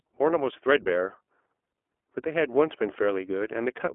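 The speech runs through the iLBC codec for its whole length, band-limited to about 250 Hz–3.4 kHz with nothing above 3.7 kHz, and plainly rough and synthetic. Unlike simple telephone filtering, the graininess resets every 20 ms frame, which fits the 15.2 kbps mode.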